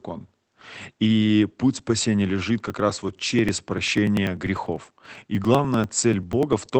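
From 2.60 s to 6.72 s there are periodic USB or driver dropouts: a little tick every 0.098 s, roughly ten a second, each where a couple of milliseconds of audio got skipped outright. They only poke through while there's sound. The speech also sits behind a call-codec band limit at 8 kHz, which fits Opus at around 24 kbps.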